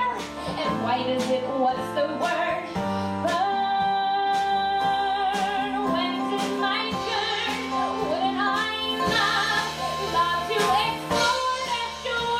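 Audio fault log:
8.62–11.57 s, digital radio blending to analogue: the receiver loses the digital stream and cross-fades over about 320 ms to the FM broadcast of the same station, then blends back near 11.57 s. You can hear the handover as a soft swap rather than a cut. FM hiss comes up, sitting roughly 30 dB under the programme, and the level shifts by about 2 dB because the two paths aren't matched in loudness.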